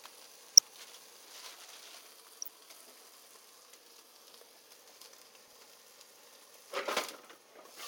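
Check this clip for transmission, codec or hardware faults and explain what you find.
DAB burbling occurs three times: 0.51 to 0.61 s, 2.39 to 2.49 s, and 5.42 to 5.53 s. Weak reception let bit errors, at a rate of a small fraction of a percent, slip past the error correction into the MP2 data. Corrupted samples put short blips of noise in single sub-bands, and corrupted scale factors make sub-bands jump in level for up to a frame. Each burst lasts about a tenth of a second, which fits a handful of damaged frames, and is heard as a brief burble over the sound.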